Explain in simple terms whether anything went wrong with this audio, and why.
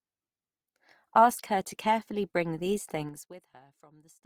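Two things stand out. All the way through, the speech has a grainy, rough and noisy texture. That's likely Opus compression: the file was squeezed hard, so the encoder patched over missing detail with noise instead of keeping every fine bit of the sound.

Then from 3.0 to 3.48 s, just after "to carefully bring these", there's zipper noise. The volume drops a long way, but it's done in coarse jumps, about fifteen a second. Each jump makes a tiny click, so you hear a quick ticking rattle as it fades.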